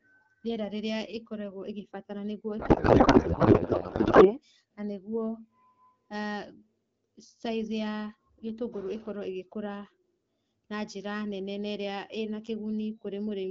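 A speech clip carried over AMR wideband (HD Voice), which sounds clean with only light coding wear, fitting a rate around 12.65 kbit/s. The problem is a codec payload misread from 2.59 to 4.37 s: the speech gives way to garbled noise and warble that barely tracks it. What it points to is octet-aligned AMR frames being unpacked as bandwidth-efficient, so every field lands in the wrong spot until the framing lines up again.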